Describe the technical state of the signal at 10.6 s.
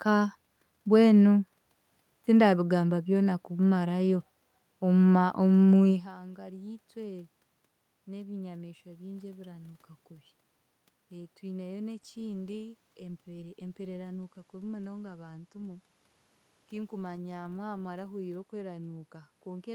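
At 10.6 s the signal is intact, with no technical fault at that moment.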